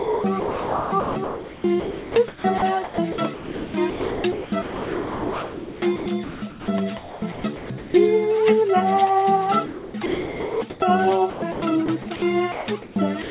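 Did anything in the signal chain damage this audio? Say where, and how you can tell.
Yes. The call processing stage, most likely the sender's voice detector, chopped the sound: it toggled transmission on and off from 0.00 to 6.68 s, 6.98 to 7.94 s, 9.66 to 10.82 s and 11.30 to 12.22 s. Stretches of sound flicker into synthetic fill, so the audio turns choppy.

The same detector also likely dropped the sound. At 12.52 to 12.68 s and again from 13.22 s to the end, it judged what was there to be background and stopped sending. That content vanishes under steady noise for roughly 140 ms and 90 ms.

Comfort noise likely replaced the background from 12.52 to 12.96 s during that discontinuous-transmission pause. The receiver generated shaped noise in place of the real ambience, which is why the texture goes flat and featureless until sending resumes. The band limit near 4 kHz comes from the G.711 call codec.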